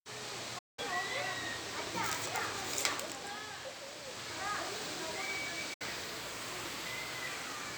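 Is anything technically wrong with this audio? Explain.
Yes. The everyday sound suffers two digital broadcast dropouts, at 0.58 to 0.79 s and 5.74 to 5.82 s. The receiver lost the signal or rejected damaged frames and muted until good ones arrived. Each hole opens and closes with a quick fade of about 8 ms, and the gap lengths point to roughly six and two lost frames of about 32 ms. Unlike network concealment, nothing is repeated or smeared. The sound simply goes silent and resumes later, with the missing portion gone.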